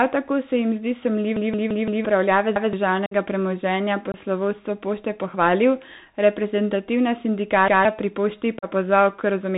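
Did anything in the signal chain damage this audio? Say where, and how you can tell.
Yes, at three stages: the codec, the playback buffer and the wireless link.

The codec stage shows a Bluetooth CVSD headset codec over the whole clip, and the damage is plainly audible. Nothing reaches above 4 kHz, s sounds come out scratchy, and a granular hiss sits under the speech. CVSD sends a single up-or-down bit per sample with an adaptive step, which fits a 64 kbit/s stream. Fast, loud high content outruns the step and distorts. A plain low-pass filter would dull the sound but leave no hiss or scratch.

In the driver or buffer stage, repeated buffers cause three stutters. Right after "tako se jim zdi", from 1.37 to 2.05 s, a 171 ms piece plays four extra times, and roughly 0.7 s of real audio never arrives. Single extra plays follow at 2.56 to 2.73 s and, after "pohvalil reprezentativna", at 7.68 to 7.85 s. 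Hard joins and an identical chunk length point to an 8192-sample buffer. Because the material repeats rather than dropping out, it can't be packet loss.

The link between headset and phone shows unconcealed Bluetooth headset packet loss. The speech has holes at 3.06 s (52.5 ms), 4.12 s (22.5 ms) and 8.59 s (37.5 ms). Each has abrupt edges, and the sound returns quieter for a moment, as a CVSD decoder does after an idle stretch. The lengths fit a handful of few-millisecond voice packets lost with nothing filled in. These are silent gaps, unlike the buffer stutters, which replay audio.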